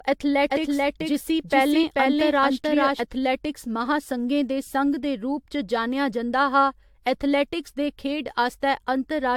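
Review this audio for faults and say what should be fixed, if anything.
Generation loss runs throughout this speech: swirly, hollow smearing with blurred attacks, and a spectrogram shows nothing above 18.7 kHz, likely from repeated lossy encoding, consistent with AAC at around 96 kbit/s. A doubled audio track appears from 0.50 to 3.00 s: a full-band copy at roughly equal level trails by about 400 ms, showing as repeated waveform shapes that start and stop abruptly, likely a duplicated track. To prevent both, keep a lossless master until a single final encode and remove the stray duplicate track before mixdown.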